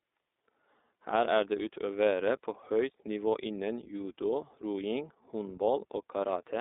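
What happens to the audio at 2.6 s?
At 2.6 s the audio carries the same iLBC codec damage present throughout: nothing above 3.8 kHz, a 250 Hz to 3.7 kHz telephone band, and a rough, synthetic edge from independently coded 20 ms frames, which fits iLBC's 15.2 kbps mode.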